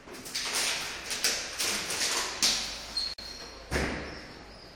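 At 3.14 s a gap at a join of encoded pieces opens for about 46 ms, lasting until 3.18 s. Two separately encoded segments were butted together untrimmed, so encoder start delay and end padding leave a brief silence with smeared edges before the sound resumes where it stopped.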